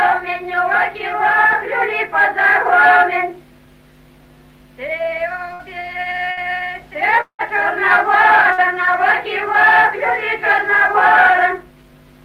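The audio has three short bursts of packet loss, at 5.53, 6.31 and 8.53 s. Each time about 60 ms of signal is lost, and the receiver extends the last sound as a brief fading buzz or hiss for roughly 50 to 58 ms before playback resumes further on. Between 7.21 and 7.42 s, a fading concealment tail gives way to about 80 ms of near-silence, and about 180 ms of material never returns, which points to a likely long network dropout rather than another short burst.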